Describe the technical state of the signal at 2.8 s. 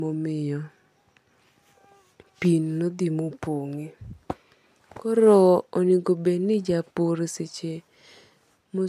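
At 2.8 s the speech signal is intact, with no audible technical fault at that moment.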